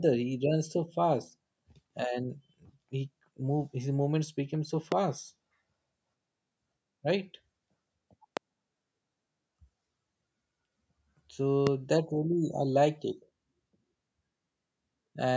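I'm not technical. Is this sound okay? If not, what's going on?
No. Something in the recording chain likely jolted the signal: a sudden electrical spike, the kind a loose plug, a switch or a static discharge makes. Each spike lands on top of the speech as a loud pop, far louder than the talking, lasting only about two hundredths of a second, while the speech carries on underneath. There are three: at 4.92, 8.37 and 11.67 seconds. The last is a little softer than the first two.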